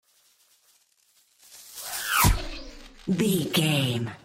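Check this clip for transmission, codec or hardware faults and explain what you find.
Checking this clip turns up no faults to explain.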